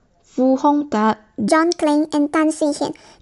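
Speech, with a wrong sample rate from 1.48 to 3.19 s: it runs 1.45 times fast and about 6.5 semitones high, fitting 22 kHz audio played at 32 kHz. Tempo and pitch rise together, unlike a pitch shift.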